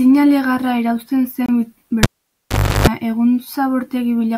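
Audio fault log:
1.46–1.49 s, Bluetooth stall: the speech cuts to 25 ms of silence, then resumes, likely because delayed packets emptied the headphones' buffer.
2.03–2.87 s, cable pulled and plugged in: a pop, about 0.8 s with the signal gone, 340 ms of 50 Hz mains buzz from a half-seated plug, then another pop.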